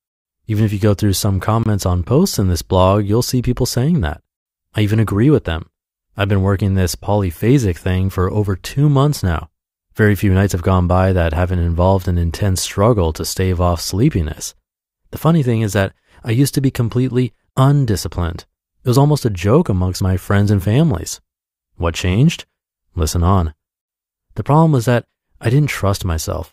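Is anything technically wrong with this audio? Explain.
Yes, there's a gap between stream segments twice: 1.63 to 1.66 s, after "you go through some", and at 19.66 s, before "amongst my friends and". Mismatched timestamps at segment joins, which fit 6-second segments, leave short holes the player fills with silence, heard as abrupt dropouts of about 23 ms and 5 ms.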